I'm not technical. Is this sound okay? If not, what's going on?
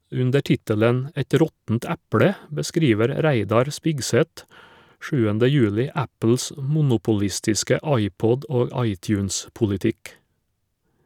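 Yes, no faults heard.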